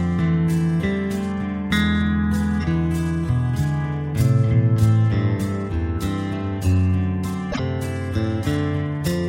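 The audio has one short fault from 7.51 to 7.59 s: a garbled disruption lasting about 80 ms, after which the sound resumes further ahead than expected. That span covers roughly three frames of about 26.1 ms each, which fits 1152-sample MP3 frames at 44.1 kHz. The likely cause is a broken MP3 bit reservoir: frames were dropped, so the next frames reached back for borrowed data and decoded bytes belonging to a different frame.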